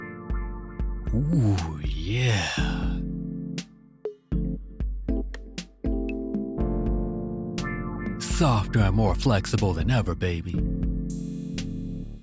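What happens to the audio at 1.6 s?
Nothing goes wrong at 1.6 s; the audio there plays through intact, with no dropout, click, distortion or other fault.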